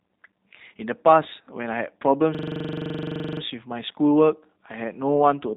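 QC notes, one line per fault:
throughout: G.729 codec, speech rebuilt from a vocal tract model and sparse pulses, which points to an 8 kbit/s codec, sounds rough and synthetic, with nothing above 3.8 kHz.
2.35–3.41 s: system hang loop, a 42.67 ms slice repeating at 23.4 Hz as a machine-gun stutter while the hardware cycled a buffer, which fits 2048 samples.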